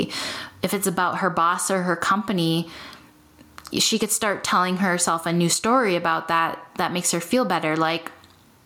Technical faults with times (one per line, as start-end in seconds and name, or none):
0.00-8.66 gain pumping